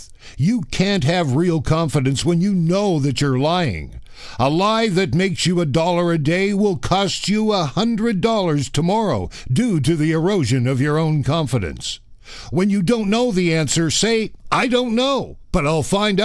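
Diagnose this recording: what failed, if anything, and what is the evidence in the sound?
Nothing in the signal points to a failure at any stage of the chain: levels, continuity and timing stay steady across the whole recording, with no dropouts, discontinuities or level breaks to diagnose.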